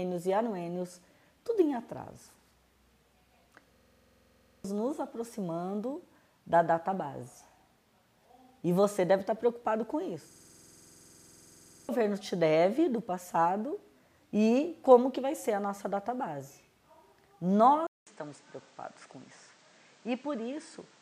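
From 3.76 to 4.64 s and again from 10.31 to 11.89 s, a 46.44 ms fragment repeats as a rapid 21.5 Hz buzzing stutter, about a second and then a second and a half of audio lost. This is a system hang loop: the system froze while the hardware replayed a ring buffer, consistent with 2048 samples. At 17.87 s, after 200 ms of silence, the sound turns duller and quieter, by about 5 dB. Nothing remains above 9.2 kHz, and new noise sits about 30 dB down. The likely cause is the input switching to a poorer device.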